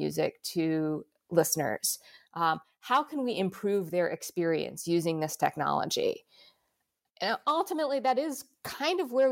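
Nothing stood out on listening to this speech recording.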